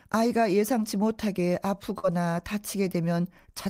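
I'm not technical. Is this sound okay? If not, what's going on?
No, there's one small glitch. At about 1.99 to 2.05 seconds you can hear a short concealed packet loss. Roughly 40 milliseconds of the speech didn't arrive in time, so the receiving end covered the gap by stretching out the sound just before it and then easing back into the real audio. It comes across as a quick smear or wobble, and a short sound in that spot can get lost.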